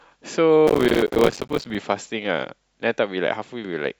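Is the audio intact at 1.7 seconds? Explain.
No. Processor overload crackle runs from 0.67 to 1.75 s: dozens of roughly 5 ms buffers miss their deadline, each leaving a silent gap, heard as gritty crackle over the speech.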